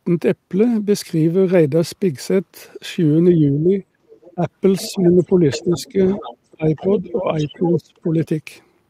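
From 3.38 to 3.83 s the speech dips by about 10 dB, likely speech suppressed in double talk. The echo canceller turned down the talker while the other side spoke. A faint leak of the other side's voice follows at 4.1 to 4.33 s. Further dips come at 4.35 to 4.44 s, 4.88 to 6.2 s, 6.54 to 6.66 s and 7.02 to 8.28 s, the deepest around 25 dB. From 4.77 to 8.0 s the other side's voice leaks through more clearly, likely echo the canceller failed to remove from the microphone.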